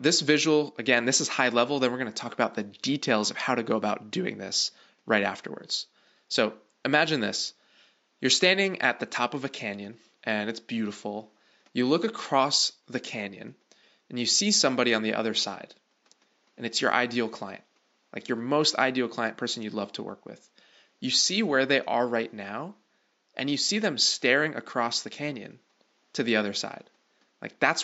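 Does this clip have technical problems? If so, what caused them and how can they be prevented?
No technical problems here; the only background is ordinary room noise sitting about 44 dB below the speech, which belongs to the recording space rather than the system.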